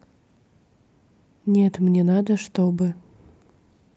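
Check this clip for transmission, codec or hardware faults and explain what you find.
Two related timing faults are present, heard over call audio that stops at about 8 kHz.

Clock drift between sender and receiver runs throughout. The sender's clock runs roughly 1.5% slow. The receiver's buffer keeps draining, so it must stretch the sound.

Repeated timing corrections occur from 0.42 to 3.91 s. Short pieces are repeated, slowing playback to about 98% and adding roughly 70 ms. Each is a small edit, spaced unevenly.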